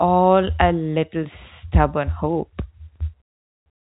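A short speech clip with no technical fault to point to. It carries the narrow band of G.711 telephone coding, with nothing heard above about 3.8 kHz.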